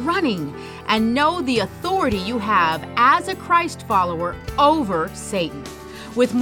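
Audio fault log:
Nothing stood out on listening to this audio.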